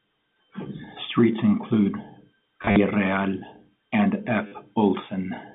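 From 2.62 to 2.76 s, packet loss with the last packet repeated: about 90 ms goes missing across 140 ms, the longest run 50 ms, and a short robotic stutter buzzes at roughly 100 Hz, which points to 10 ms packets. At 4.47 s a 50 ms gap repeats the same way. A waveform shows identical copied blocks with jumps at each join, and a spectrogram shows vertical click lines within the 150 Hz to 3.6 kHz telephone band.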